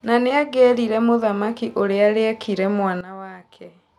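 Speech whose level, along with its background noise, abruptly drops by about 14 dB at 3.01 s and stays down to the end at 3.99 s: a sudden gain jump, likely a digital gain change applied from one sample to the next without a ramp.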